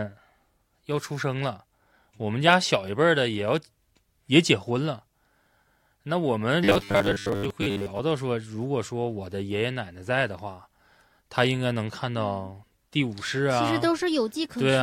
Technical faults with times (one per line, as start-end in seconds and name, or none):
6.64-8.00 robotic sound from repeated short buffers